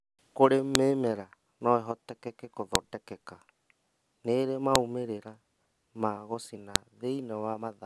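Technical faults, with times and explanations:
0.75, 2.75, 4.76 and 6.76 s, file header played as audio: a sharp snap every 2 s where joined WAV pieces kept their headers, whose bytes play as samples.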